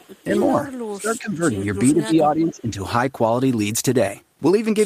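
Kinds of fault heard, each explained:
speech suppressed in double talk: The voice is pulled down at 0.0 to 0.09 s, 0.89 to 1.73 s and 1.9 to 2.76 s, by up to about 25 dB, likely an echo canceller ducking everything while both sides spoke. Waveforms show a caved-in envelope, and spectrograms show faded, patchy energy.
echo leak: Faint copies of the voice, about 35 dB below it and lagging by 430 ms, appear at 0.08 to 0.24 s and 0.77 to 0.88 s, likely loudspeaker pickup an echo canceller failed to remove. Spectrograms show weak ghost traces trailing the main speech bands.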